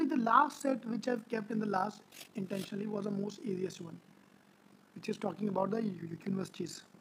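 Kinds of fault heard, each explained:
Overlap-add ripple: windowed frames were rejoined with overlaps that don't sum to a steady gain, so the level dips by about 11 dB roughly 50 times a second throughout. The waveform envelope scallops regularly and the spectrogram shows vertical banding.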